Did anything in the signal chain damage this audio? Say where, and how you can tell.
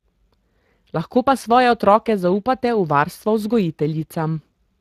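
Yes. Speex codec damage runs throughout the speech, at the codec stage. The voice sounds plainly hoarse and grainy, which fits a Speex stream at around 22 kbps. The CELP coder spends too few bits on the excitation signal, so the voicing comes out noisy instead of clean. The upper band above 8 kHz is rebuilt as shaped noise rather than real detail, and nothing remains above 15.3 kHz.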